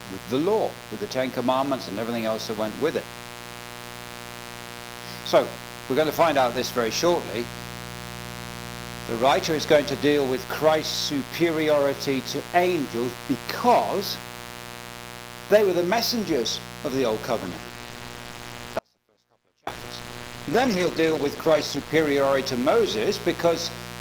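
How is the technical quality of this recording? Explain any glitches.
The recording has three clear problems: a mains buzz under the whole clip, a stretch of degraded call audio near the end, and a brief cut inside that stretch.

Mains buzz runs from start to finish, roughly 15 dB below the wanted sound. It is built on 60 Hz, and sharp switching spikes twice per mains cycle push a dense ladder of harmonics into the kilohertz range. It is heard as a steady, raspy buzz. A spectrogram shows evenly spaced horizontal lines at 60 Hz multiples across the full width. The waveform has a constant noise floor that never drops to silence.

A call bitrate drop starts at 17.44 s and lasts until 22.01 s, holding at its lowest for about 4.5 s. The sound turns rough and watery and loses its top end, which fits the encoder being squeezed from about 32 to 11 kbps. With so few bits it codes coarsely and discards the highs. 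On a spectrogram, the upper frequencies vanish above a sharp, flat ceiling, and the remaining energy looks blotchy and smeared until recovery.

An audio dropout to a faint residue occurs from 18.79 to 19.67 s, a gap of 0.88 s. The sound cuts off abruptly, leaving only a faint trace roughly 35 dB down, then returns just as suddenly. This is likely a brief loss of the signal while the path after the break stayed live. The waveform shows a near-flat block with square edges. The spectrogram goes dark in that span, apart from the buzz lines and a faint wash.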